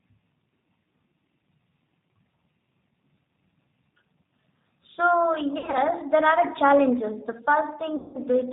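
G.729 coding runs through the whole speech clip at 8 kbit/s. Each 10 ms frame is rebuilt from a vocal tract filter, a pitch predictor and a few pulses, so nothing above 4 kHz survives and the voice sounds plainly rough, thin and slightly synthetic.

VoIP packet loss concealed by the speech codec first appears from 5.58 to 5.78 s, where 120 ms of audio goes missing in gaps spread over 160 ms, the longest run lasting 60 ms. The decoder fills each gap by extending its last pitch and filter at falling gain, which leaves brief buzzy, smeared stretches. A longer 180 ms loss from 7.96 to 8.17 s draws the same tone out until it fades, and the voice stays weak as it recovers.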